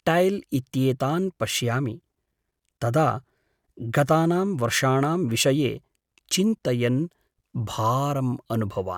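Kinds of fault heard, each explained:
No faults detected in the speech recording; nothing to report.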